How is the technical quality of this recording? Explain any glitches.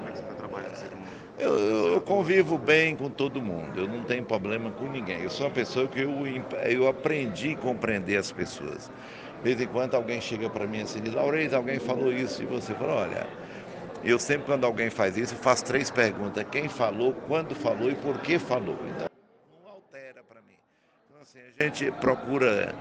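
The recording has one clear glitch, an audio dropout to a faint residue. From 19.07 s to 21.61 s, about 2.5 s, the sound cuts abruptly to a faint leak roughly 25 dB below normal, then returns. The likely cause is a signal break upstream while the later path stayed live.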